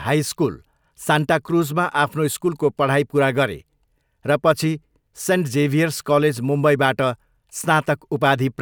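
Nothing here goes wrong technically, so there's no fault to point to anywhere in this bit of speech.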